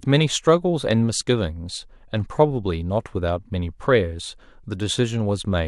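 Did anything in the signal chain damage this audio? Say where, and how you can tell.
No, nothing in the signal chain audibly damaged this speech at any stage.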